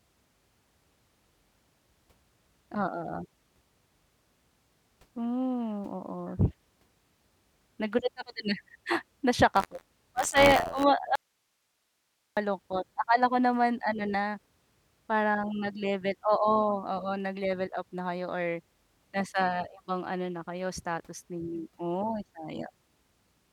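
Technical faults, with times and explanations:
9.54 to 10.83 s, buffer tearing. A robotic buzz rides on the speech at 86.1 Hz, which fits a 512-sample buffer. The writer and reader have slipped. So a small slice of each period replays audio a few tens of milliseconds old, with hard joins on both sides.
11.16 to 12.37 s, audio dropout to a faint residue. The speech cuts out abruptly for 1.21 s. Only hiss remains, roughly 50 dB below the speech. The likely cause is a lost signal feed while the path after it stayed live.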